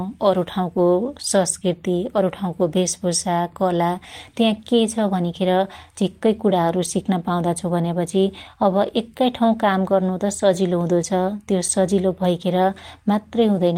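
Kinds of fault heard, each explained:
No technical faults can be heard anywhere in the audio.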